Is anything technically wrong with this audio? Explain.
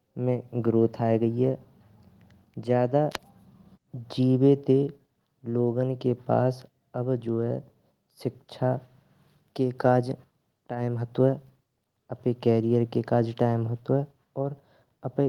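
No, nothing is technically wrong.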